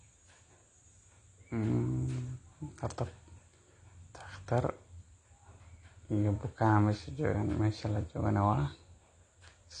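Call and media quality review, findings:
Dull, band-limited speech throughout. Nothing above 9.8 kHz. Plainly audible smearing and fizzy, warbling sibilants. Likely AAC compression (AAC-LC), at a bitrate around 32 kbps. Encoder quantises coarsely to save bits and cuts the top band.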